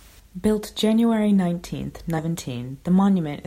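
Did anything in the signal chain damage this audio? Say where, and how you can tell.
Yes, damaged data in a compressed stream, at the codec or storage stage: a brief glitch from 2.18 to 2.20 s in the speech. Corrupt bytes made the decoder misread frames and lose sync.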